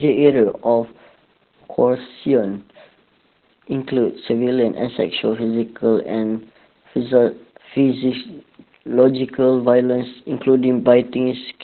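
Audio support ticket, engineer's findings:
Opus voice compression throughout. Speech band-limited, nothing above 4.2 kHz. Muffled, hoarse, slightly robotic tone. Probable component: SILK voice coder in narrowband mode. Excitation coded coarsely, upper band dropped entirely. Heavy damage points to a very low bitrate, around 8 kbps. Consistent across the whole clip.

Hard clipping, 0.25 to 0.29 s. Short crackle on the peak. Overload of about 2 dB. Probable component: converter or gain stage upstream. Peaks cut flat, adding high harmonics. Brief, mild, single event.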